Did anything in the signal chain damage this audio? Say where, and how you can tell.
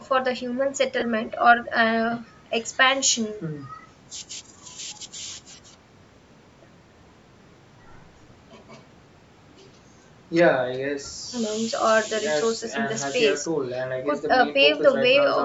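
Yes. At about 1.00 to 1.02 s the speech briefly turns into a grainy, noisy smear instead of clean tone. That is lost LE Audio frames on the Bluetooth link. About 20 ms of audio went missing, which fits two 10 ms LC3 frames. The decoder covered the gap by repeating the last good spectrum with scrambled phase signs, so the harmonics lose their structure and blur into noise. The band stopping at 8 kHz comes from the call's microphone processing.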